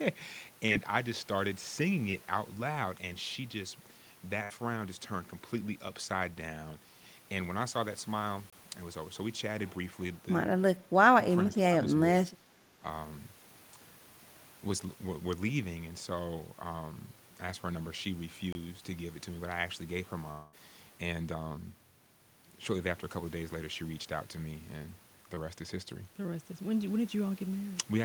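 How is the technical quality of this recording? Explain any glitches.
The recording has several distinct transmission faults scattered through the speech, of five different kinds.

Short concealed packet loss occurs three times: 0.67 to 0.71 s, 2.11 to 2.15 s, and 25.35 to 25.39 s. Each time about 20 ms of audio failed to reach the decoder in time. The receiver bridged the hole by extending the preceding sound for roughly 20 ms, then blended back into the real signal. You hear a brief smear or wobble. A quick consonant can disappear inside it.

A burst of packet loss runs from 4.43 to 4.58 s. Here about 60 ms went missing in a row, more than a single packet could cover. The decoder stretched the last sound across about 64 ms and faded it as the gap continued. Voiced sound turns into a short held buzz, unvoiced sound into a dying hiss. About 14 ms of the original is simply gone when playback resumes.

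A gap between chunks appears at 8.50 to 8.53 s and again at 18.53 to 18.55 s. Each is a 25 ms hole of silence. They fall about 10 s apart, matching 10-second chunk boundaries. Nothing is lost. The sound is just interrupted at each join, which points to padding or late chunk start-up.

Speech suppressed in double talk affects three stretches: 10.83 to 10.89 s, 11.48 to 11.87 s, and 12.29 to 12.82 s. The level dips by a few dB in the first and around 10 dB in the other two. The affected spans total roughly 70, 300 and 500 ms. The likely cause is an echo canceller that confused near-end speech with loudspeaker echo while both sides talked. It pulled the level down in pieces.

A long network dropout spans 20.31 to 20.55 s, with about 220 ms of audio never played. The receiver covered roughly 214 ms of it by continuing the last sound and letting it decay. The gap was short enough that it never reached true silence. 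It sounds like a fading buzz or hiss before the speech jumps ahead. The cause is likely a stall in delivery across the network.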